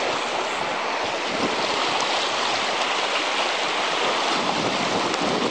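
No technical faults can be heard anywhere in this audio.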